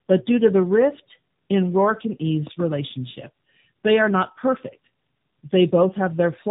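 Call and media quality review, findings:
Tandem speech coding, whole clip: speech rough, muffled, warbly. Spectrogram shows a hard ceiling near 3.7 kHz and smeared, blotchy harmonics with frame-rate flicker. Sounds like two low-rate speech coders in series, consistent with G.729A transcoded via G.711 into AMR-NB 10.2 kbit/s. The second coder re-encodes the first one's errors, so distortion compounds.

Loud pop, 2.47–2.62 s: two sharp pops on top of the speech, peaking about 10 dB above the signal. Waveform shows two narrow spikes, and the spectrogram shows two full-band vertical lines. Speech continues underneath. Likely an electrical transient such as a plug, switch, static discharge or driver glitch, shaped by the downstream circuitry.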